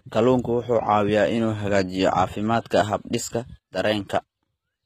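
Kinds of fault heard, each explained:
HE-AAC compression: Treble seems copied up from lower bands, likely HE-AAC near 20 kbps. S sounds turn gritty and lispy, with nothing above 14.9 kHz.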